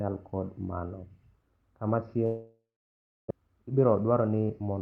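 From 2.25 s the speech trails into a buzzy, fading smear, followed by about 0.66 s of silence. When it resumes near 3.32 s, roughly 0.76 s of the speech is simply gone. This is likely a long network dropout: no packets arrived for over a second, so the receiver stretched the last sound into a decaying fill before falling silent. Playback then picked up later in the stream, adding about a third of a second of delay.

Right after, from 3.41 s to 4.79 s, the speech sounds hurried but keeps its normal pitch, running at about 110% speed. This is a jitter buffer speed-up. The buffer held more audio than it wanted. To shed that backlog, the receiver repeatedly cut out pitch-period-sized slices, trimming around 150 ms in total.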